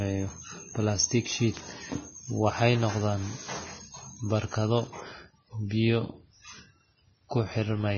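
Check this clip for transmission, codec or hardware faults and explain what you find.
Two faults are present: heavy lossy-codec damage across the whole speech clip, and two isolated digital ticks.

Vorbis compression, throughout: the coarse, hissy treble and nothing above 6.6 kHz likely come from low-rate Vorbis coding, consistent with roughly 17 kbps. Sibilants turn grainy and onsets smear.

Bit error spikes, at 1.57 s and 4.87 s: flipped bits push one to three samples to a far-off value before snapping back, each producing a sharp, broadband tick.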